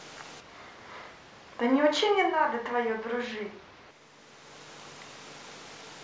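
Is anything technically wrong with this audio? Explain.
Yes. From 0.40 to 3.91 s there is a switch to a distant microphone: the close mic likely dropped out, so the voice turns roomy, thinner and around 10 dB quieter, with more room noise.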